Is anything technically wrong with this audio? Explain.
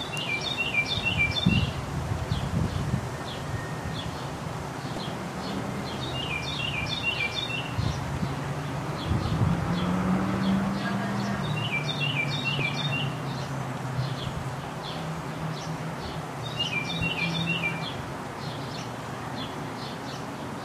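Yes, there's damaged data in the compressed stream, and it shows up twice: a short blip from 4.94 to 4.97 s, and an even briefer one at 12.59 s. In both spots some of the encoded bytes were wrong, so the decoder misread those frames, lost sync and had to hunt for the next valid frame header before the sound could carry on cleanly. That's why each spot comes through as a brief glitch in the audio.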